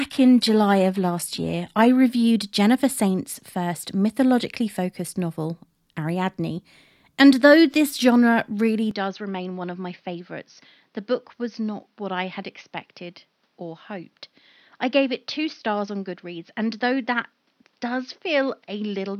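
For the first 2.0 s the adaptive stream starts at a low bitrate: treble sounds thin and smeared, consistent with a low-rate HE-AAC stream, then quality jumps up cleanly with no gap.

At 8.91 s, right after "though this genre really", the sound turns dull and about 5 dB quieter, likely from the input switching to a poorer device. Nothing above 6.3 kHz remains, with a new noise floor around 45 dB down. Unlike a bitrate change, it adds its own noise and never recovers.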